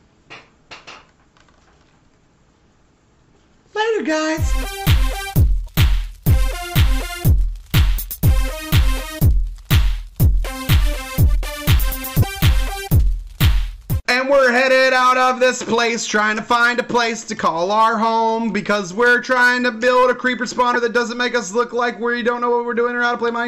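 From start to finish, a stage in the chain receives a signal about 5 dB hotter than it can pass, so its peaks are sliced flat: hard clipping. Only around three percent of samples reach that ceiling, so loud moments crackle with added high harmonics.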